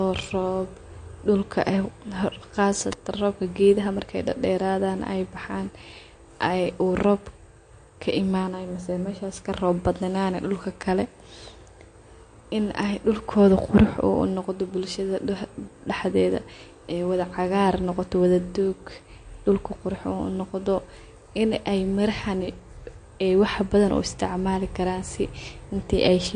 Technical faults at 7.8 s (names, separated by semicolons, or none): MP3 compression